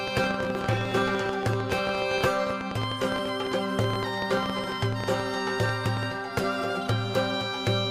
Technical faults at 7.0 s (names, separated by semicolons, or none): none